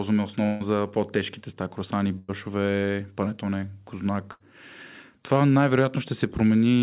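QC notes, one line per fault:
0.46–0.62 s, 2.18–2.30 s, 4.32–4.42 s, burst of packet loss: the sound smears into a held buzz or fading hiss, then jumps ahead; about 140, 100 and 80 ms of audio were lost and concealed.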